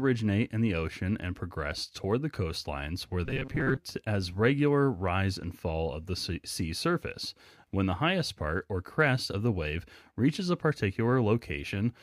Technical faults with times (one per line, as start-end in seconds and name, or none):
3.26-3.79 robotic sound from repeated short buffers